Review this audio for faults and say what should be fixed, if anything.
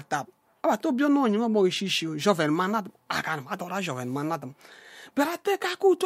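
Nothing needs fixing here, since no faults turn up anywhere in this speech recording.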